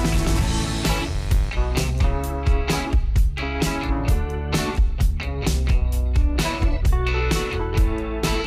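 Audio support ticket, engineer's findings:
Mains buzz, 0.0 to 1.5 s: steady raspy buzz riding about 10 dB under the signal, then gone. 50 Hz base with harmonics up into the kilohertz range.

Probable culprit: dimmer, rectifier or an unshielded run. Sharp switching spikes twice per mains cycle getting into the path. Worth checking grounding and shielding on whatever was live during those first 1.5 s.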